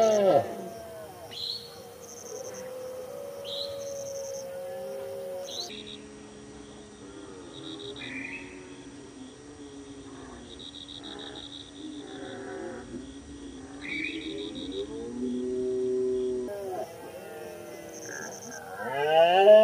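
A recording of sounds in which, from 5.69 s to 16.48 s, everything suddenly turns deep, heavy and drawn out, then snaps back to normal. This is a section at the wrong speed: that stretch plays at 0.604 times its original rate, so pitch drops by about ten semitones as events stretch out in time. The abrupt change at both boundaries likely comes from an editor or player handling that portion against the wrong clock.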